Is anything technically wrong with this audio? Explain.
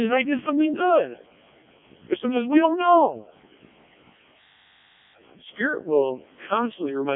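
Yes. Throughout, the speech has gone through the Codec 2 vocoder, sounding robotic and buzzy within a 200 Hz to 3.5 kHz band. The heavy damage suggests its lowest 0.7 kbit/s mode. Unlike a waveform codec, it resynthesises sine waves from pitch and envelope rather than keeping the waveform.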